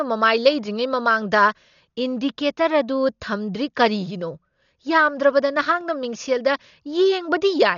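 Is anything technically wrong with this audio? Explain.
Yes. Throughout the speech there is heavy coding damage, likely from Dolby Digital compression at a very low bitrate, around 40 kbps. Starved of bits, this kind of encoder narrows the band and leaves many frequency lines without mantissa data, so the decoder fills them with dither noise. The result here is a dull sound with nothing above 7 kHz, and a rough, fluttering noise clinging to the tonal parts of the speech.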